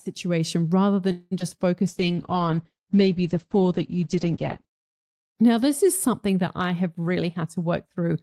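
At 1.11 s the speech stops moving forward and the last sound is stretched into a fading buzz or hiss for about 0.2 s, until 1.33 s, with no drop to silence. This is a call audio freeze, likely caused by packets stalling in transit so the jitter buffer ran dry. The receiver extended what it last had, and when delivery resumed the audio picked up where it had stopped, adding about 0.2 s of delay rather than losing anything.

Right after, two brief smears mark short concealed packet loss, at 1.39 to 1.42 s and 1.50 to 1.53 s. In each, a slice of speech never reached the decoder in time, 40 ms in the first and 20 ms in the second. The gap was bridged by extending the preceding sound and blending back into real audio, with only 11 ms and 7 ms synthesised. Because so little was filled in, parts of the sound are simply gone, and the first event takes back roughly 30 ms of the delay the freeze had added.

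From 1.84 to 2.34 s the speech drags at 93% of normal speed while the pitch holds steady, with drawn-out sounds. This is a jitter buffer slow-down. With its reserve running low or its target delay just raised, the receiver repeated single pitch periods and pieces of pauses over and over, inserting 39 ms in total to rebuild a cushion.

Overlapping that, from 1.89 s to 4.73 s, the sound turns muffled, rough and watery. This is a call bitrate drop. The estimated bandwidth fell, and the encoder went from 48 kbps down to 9 kbps, staying at the bottom for about 2.7 s. At that rate the coding becomes coarse and the audio band shrinks from 20 kHz to 8 kHz, which strips away the crisp top end until the rate recovers.

After "something that I have", from 7.05 s to the end, the speech sounds hurried, running at 112% of normal speed with unchanged pitch. This is a jitter buffer speed-up. The buffer held more audio than its target, so the receiver cut out short runs of one or a few pitch periods repeatedly, trimming roughly 150 ms to bring the delay back down.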